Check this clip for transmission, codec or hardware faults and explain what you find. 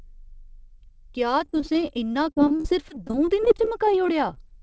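One transmission fault stands out: repeated packet loss (robotic sound) from 1.40 to 4.37 s in this speech. About 30 short gaps, none longer than 39 ms, were each patched by stretching the preceding sound. That concealment covers roughly 16% of the span and gives choppy speech with pieces missing. A spectrogram shows smeared, repeated harmonic slices and brief breaks. The waveform shows recurring stretches of copied cycles. The band ends cleanly at 8 kHz, which fits a wideband call codec.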